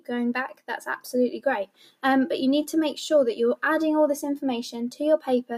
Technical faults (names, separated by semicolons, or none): noise suppressor applied to music or sounds; sound cut by the noise suppressor